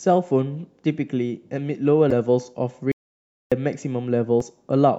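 Damaged data in a compressed stream appears first from 2.08 to 2.12 s, a short disturbance lasting about 44 ms. Bytes in the encoded stream were corrupted there, so the decoder misread the affected frames, lost its place and had to search for the next valid frame header before clean speech resumed. The same kind of fault returns from 4.38 to 4.42 s as another brief blip of about 46 ms.

Between them, an audio dropout to silence runs from 2.92 to 3.52 s. The speech cuts off mid-flow and about 0.6 s of it is simply gone. The gap is dead digital silence with no room tone underneath. That points to the input signal being lost while recording carried on writing silence, likely from a momentarily disconnected device or a failed link, and then the speech resumes abruptly.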